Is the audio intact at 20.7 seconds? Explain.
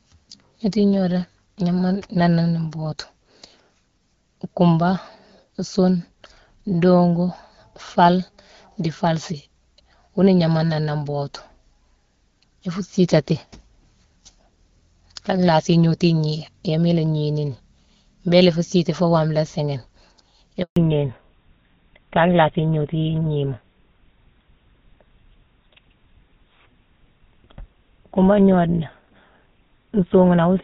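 No. A handover gap runs from 20.62 to 20.76 s: for 140 ms no speech frames arrive while the call switches networks, so the sound drops out to silence and that stretch is lost. When audio resumes at 20.76 s, a fallback to narrowband sets in. The HD Voice band collapses to nothing above 4 kHz, consistent with a switch to a GSM full-rate codec, and the speech sounds duller and rougher from there on.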